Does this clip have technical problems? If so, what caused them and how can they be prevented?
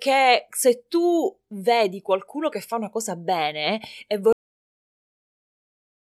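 Yes, a cut-off end: after "una cosa bene e" the speech stops mid-sound at 4.33 s and drops straight to digital silence, because the final buffers were never written. Flush and close the recording stream fully before ending capture.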